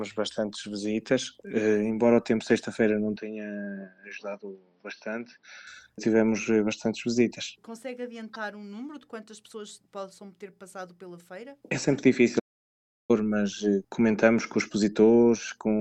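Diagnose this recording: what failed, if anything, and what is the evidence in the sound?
From 3.16 s to 5.67 s the sound turns dull and boxy with no gap at the switch. The band narrows, the level falls by about 10 dB, and a new noise floor sits roughly 40 dB down. The likely cause is an input switched to a poorer device at the driver stage.

At 12.39 s the audio cuts out for 0.7 s and resumes at 13.11 s. That dead stretch in mid-flow is a playback stall, likely caused by the player's buffer running dry or its output thread being blocked until it recovered.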